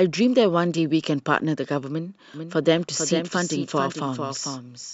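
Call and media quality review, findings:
Doubled audio track from 2.34 s, running to the end. Second full-band copy of the speech trailing roughly 0.4 s behind, about 5 dB below the original. No decay, no room colour, abrupt onset. Likely cause: a slower second capture path mixed in alongside the primary, or an edit holding two misaligned copies. Fixed offset, echo-like but without the tail a real reflection would carry.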